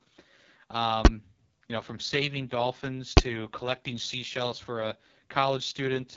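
The speech runs through the AMR wideband (HD Voice) codec at 6.6 kbit/s, its lowest rate, so the coarse pulse-driven model leaves voices rough and raspy, with nothing above 7.5 kHz. At 1.05 s, just before "you know from saving", and at 3.17 s, between "know from saving dolphins" and "to collecting seashells for", invalid numbers at full scale appear: a calculation failed and pinned each 10 ms block to a single extreme value far beyond the speech peaks, heard as a single sharp bang.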